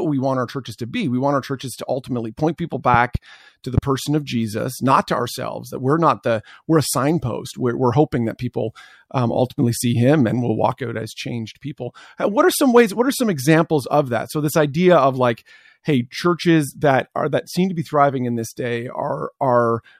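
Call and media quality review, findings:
Loud pop, 2.94–3.18 s, after "to ultimately point people": double pop about 10 dB above the speech, which continues underneath. Likely a voltage step from a connector, switch or static discharge, shaped by downstream circuitry. Waveform shows two tall spikes; spectrogram shows two full-band vertical lines.

Loud pop, 3.78–3.80 s, after "to the", before "person of": single louder thump about 15 dB above the speech. Likely the same electrical transient source. Waveform shows one isolated spike; spectrogram shows one broadband vertical stripe.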